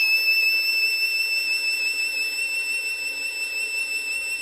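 From the start to the end of the music, nothing is present above 13.6 kHz. Everything above that is simply missing. The likely cause is low-bitrate audio saved at a high bitrate. The sound fits a lean Vorbis encode near 25 kbit/s, later rewritten as a 256 kbit/s MP3. The second pass cannot restore what the first removed. The earlier band limit survives intact.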